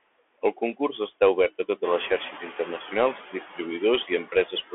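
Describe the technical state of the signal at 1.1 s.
At 1.1 s the speech passes through a noise suppressor, and the noise suppressor artifacts are present there as through the whole clip. The suppressor judges which bands hold steady background and pulls them down frame by frame, here by about 21 dB. Between syllables the room noise sinks away and then swells back under the speech. On a spectrogram the pauses look nearly empty, with only residual patches left.

The same moment also carries the Bluetooth CVSD headset codec, which affects the entire clip. Its one-bit up-or-down steps, which fit a 64 kbit/s headset link, follow the waveform with an adaptive step size. Fast, loud high content outruns the step, so sibilants sound scratchy over a granular hiss. A spectrogram shows a hard ceiling with nothing above 3.7 kHz and little below 300 Hz. The waveform looks jagged where the step lags.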